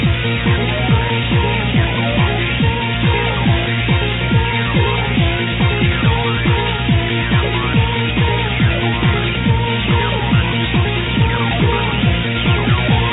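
Nothing in the clip stood out as a technical fault on listening.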